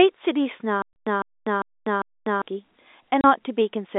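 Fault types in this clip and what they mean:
Stutter with silent gaps: From 0.82 to 2.42 s, a 153 ms fragment of speech plays four times, once every 0.4 s, with about 247 ms of dead silence after each. The likely cause is a stalled stream replaying its last fragment at each retry. The intended audio there is lost.
Packet loss filled with silence: Two abrupt 30 ms holes cut the speech, at 0.93 s and at 3.21 s. Each fits a single dropped packet replaced with silence. They have hard edges, and the first hole falls inside the stutter span.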